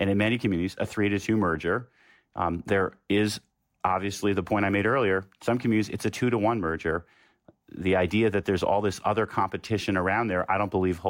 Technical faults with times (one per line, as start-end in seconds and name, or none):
none